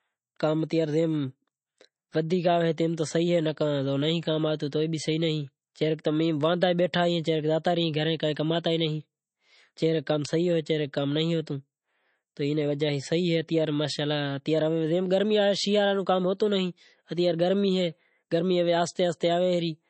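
Speech that sounds watery and swirly throughout, with nothing above 8.3 kHz; this is likely MP3 compression at a low bitrate, consistent with roughly 32 kbps.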